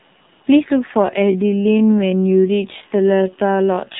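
From the first moment the speech carries damage from an AMR narrowband mobile codec. Everything above about 4 kHz is missing, so on a spectrogram the energy stops at a hard ceiling with empty space above it. The codec rebuilds the voice from a vocal-tract model excited by a few pulses per short subframe. Here that leaves a plainly audible buzzy, synthetic edge, which fits a low mode around 7.4 kbps. The waveform looks smoothed and loses fine detail.

At 1.0 s a time-stretched section begins and runs to the end of the clip. The pace suddenly drops to about two-thirds speed while the pitch stays put. This is likely a pitch-preserving stretch that repeats short pieces of the signal to fill the extra time. The slowed speech drags. On a spectrogram, syllables and harmonic bands become drawn out. The waveform shows longer, repeated-looking grain patterns from 1.0 s onward.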